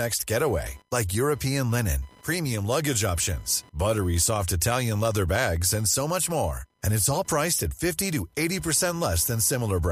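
Computer activity noise runs under the speech for the whole clip: a thin buzz pulsing near 1 kHz, roughly 30 dB below the speech. Shifting processor or graphics load is disturbing the shared ground of the audio circuit, so the buzz tracks the machine's activity rather than the speech.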